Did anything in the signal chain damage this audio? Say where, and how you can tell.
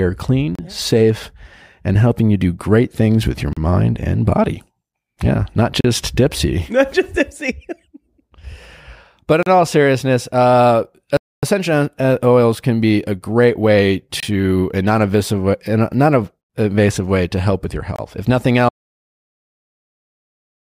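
Yes. Bluetooth playback stalls, short silences at 0.55, 3.53, 5.81, 9.43, 14.20 and 17.96 s plus 11.17 to 11.43 s, likely from an emptied headphone buffer during retransmission. Sound resumes where it stopped.

An audio dropout to silence runs from 18.69 s to the end. Unlike a brief stall, it never recovers, likely from a lost input that left only silence.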